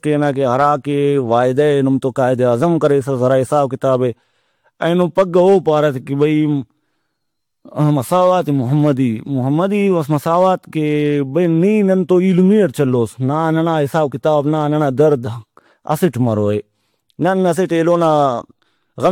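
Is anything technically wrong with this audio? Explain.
Yes. Generation loss runs throughout: the speech was likely decoded and re-encoded about four times, each pass requantising on a shifted frame grid, so noise and spectral holes accumulate. It sounds swirly, hollow and smeared, with blurred attacks, worse than a single encode consistent with AAC near 96 kbit/s would explain.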